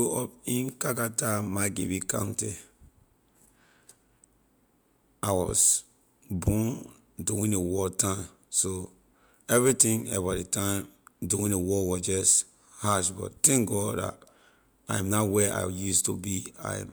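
Listening to the recorded speech turned up nothing that stood out as a technical problem.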